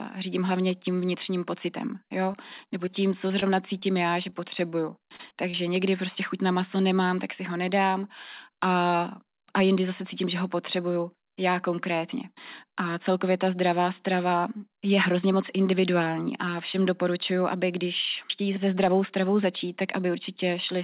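From 2.32 to 5.55 s, between "tím vnitřním pocitem jo" and "někdy prostě chuť na", there are scattered short gaps. About ten packets were lost or arrived late, 160 ms of audio in all, none longer than about 30 ms. The receiver patched each hole by extending the preceding sound, roughly a fifth of a second of fill, or around 7% of the stretch. The result is a string of brief ticks and smears through otherwise continuous speech.

At 16.04 to 16.08 s, after "strava je hrozně moc" and before "a všem doporučuju aby", there is short concealed packet loss. A 20 ms packet never reached the decoder in time, so the decoder synthesized a continuation of the last sound and blended it back into the speech. It is heard as a quick wobble. The narrowband call path, with nothing above 4 kHz, fits G.711 A-law.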